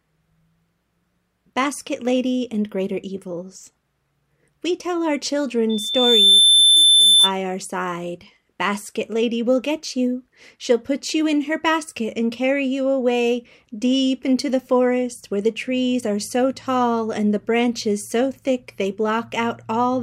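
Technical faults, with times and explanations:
5.69 to 7.31 s: loudspeaker feedback squeal. A single tone at 3.5 kHz rises out of the sound and swells over roughly 0.7 s. It peaks well above the rest of the audio, around 10 dB louder. The microphone is picking up its own loudspeaker. At 3.5 kHz the loop gain exceeds one. Each pass round the loop makes that frequency louder, so it builds by itself. It stops at 7.31 s.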